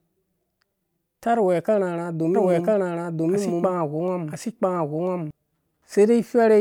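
Speech, with a doubled audio track from 2.35 to 5.31 s: a second full-band copy of the speech runs about a second behind the original at roughly the same loudness, so the two overlap and compete. What separates it from an echo or reverb is that the copy has no decay tail, no room colouring and no further repeats, and it appears and vanishes abruptly. The likely cause is the signal being captured again through a slower path.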